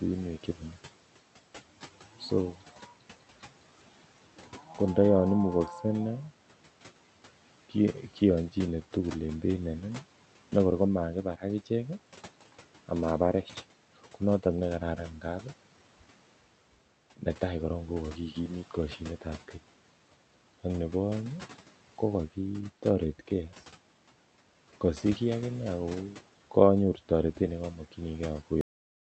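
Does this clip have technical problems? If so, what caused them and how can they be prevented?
Yes, there's a cut-off end. At 28.61 s the speech just stops mid-sound and falls straight to digital silence, with no decay. The last stretch of audio, about half a second, never made it out. The final buffers weren't written or played before the stream closed, so everything after that point is gone. The room noise, sitting about 22 dB under the speech, vanishes with it, and the top end is capped around 8 kHz, which fits an Opus call path at roughly 48 kbps. To prevent it, flush and drain the remaining buffers before stopping the recorder or closing the stream.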